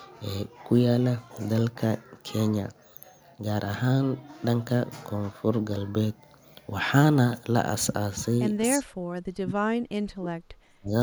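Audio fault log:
8.77–9.89 s and 10.07–10.93 s, speech suppressed in double talk: the speech is pulled down hard in two bursts, by as much as about 40 dB at the deepest, covering roughly a second of the first span and most of the second. This is likely an echo canceller treating simultaneous far-end talk as echo and clamping the near-end signal along with it.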